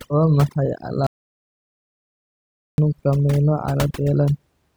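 A noise reduction stage was set far too aggressively, so across the whole recording it pulls individual frequency bands down or out whenever they sit close to its estimate of the noise floor. Quieter components of the speech are removed along with the noise. The background drops away and breaks up into small twinkling artefacts, which is the signature of overdone noise removal.

From 1.07 s to 2.78 s the audio input was likely lost, perhaps through a dropped connection or an accidental mute, while recording carried on writing silence. This is an audio dropout to silence lasting about 1.7 s. The sound cuts off abruptly mid-flow and resumes just as suddenly. The gap holds silence with no room tone at all, and whatever was spoken in that stretch is missing.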